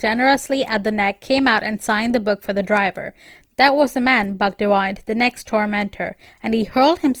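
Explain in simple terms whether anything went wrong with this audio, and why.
Throughout the speech, from start to finish, the sound is rough and grainy, with noise in place of clean tone, though the highs stay present. That likely points to Opus compression, which fills missing detail with noise instead of the swirling gaps MP3 leaves.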